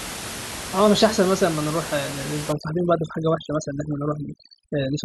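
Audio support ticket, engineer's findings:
Overdone noise removal, 2.52 s to end. Denoiser cuts bands near its noise estimate: room noise (about 10 dB below speech) becomes twinkling specks. Spectrogram: isolated bins, dark holes.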